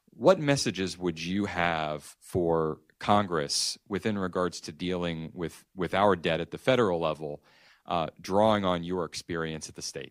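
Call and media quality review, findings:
No faults found on review of the speech; nothing to action.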